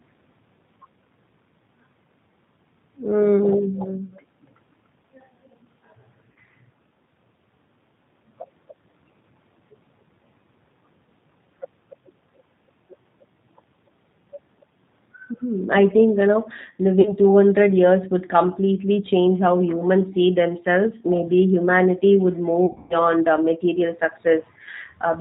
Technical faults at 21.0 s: G.729 codec

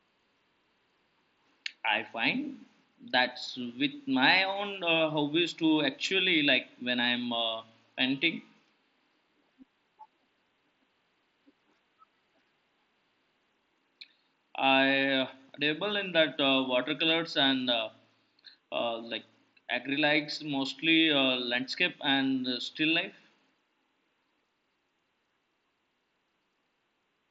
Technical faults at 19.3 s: none

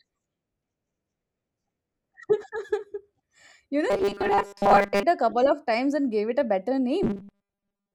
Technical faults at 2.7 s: none

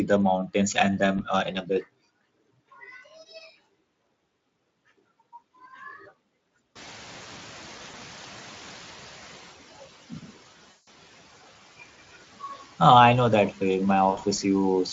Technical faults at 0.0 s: none

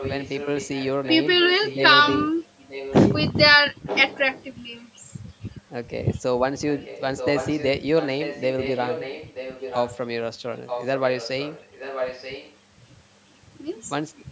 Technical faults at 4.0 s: echo leak

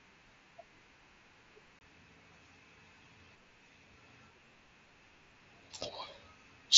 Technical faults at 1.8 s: unconcealed Bluetooth headset packet loss

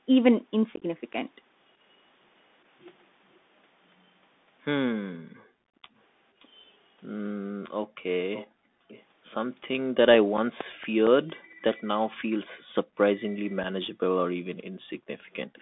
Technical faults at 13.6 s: Bluetooth CVSD headset codec; unconcealed Bluetooth headset packet loss

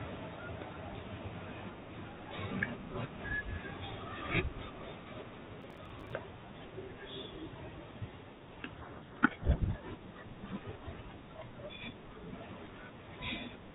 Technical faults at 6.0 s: processor overload crackle

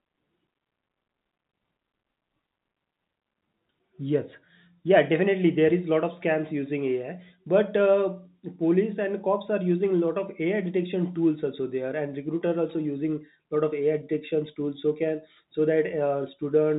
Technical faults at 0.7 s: none

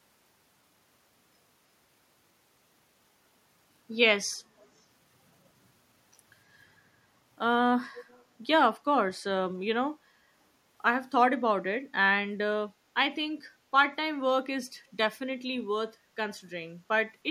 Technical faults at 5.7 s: none

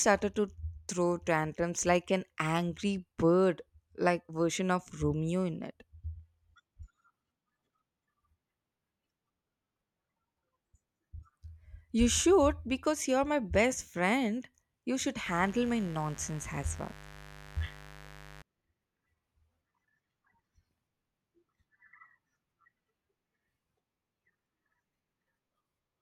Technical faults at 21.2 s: none

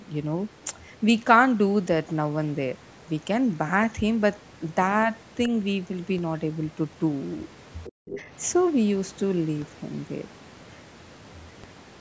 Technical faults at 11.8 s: DC step

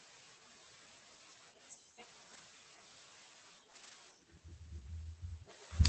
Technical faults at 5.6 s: none

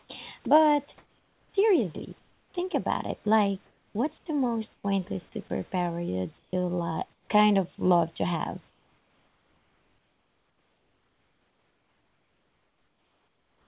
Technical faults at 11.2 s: comfort noise in place of the background

